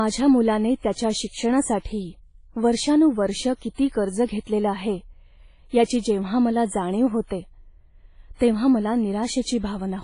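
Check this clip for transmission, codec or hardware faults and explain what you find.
The speech carries one codec fault for its whole length, most likely WMA compression. Nothing is present above 10.1 kHz, so the top band is simply gone. A transform codec running long blocks spreads quantisation noise over tens of milliseconds around each sound and zeroes weak spectral lines. The damage here is heavy, which fits a low bitrate around 24 kbps. The speech sounds ringing and washy, with a hiss that swells and fades along with the signal.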